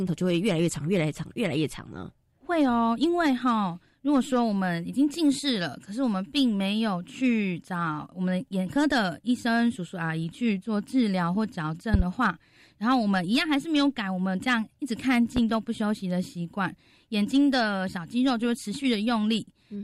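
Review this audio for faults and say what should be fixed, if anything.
Two loud pops sit on top of the speech: a quick double pop at 11.94–12.03 s, and a single one at 15.37–15.40 s, both jumping well above the speech level. That's likely a voltage spike from a plug, switch or static discharge getting into the chain. To prevent it, secure connections and avoid touching switches or cables while recording.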